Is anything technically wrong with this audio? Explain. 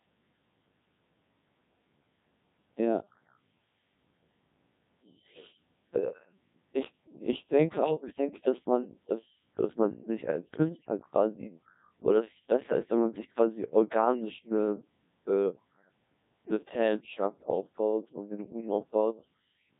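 Yes, two things. The whole clip has gone through the Codec 2 vocoder at about 1.6 kbit/s. Only pitch, voicing, energy and spectral shape survive, so the speech is resynthesised and comes out heavily robotic and buzzy.

Around 7.83 to 7.91 s there's a burst of bit errors on digital voice radio, with maybe a couple of percent of bits flipped. The decoded parameters jump, giving a brief warbly, bleepy glitch.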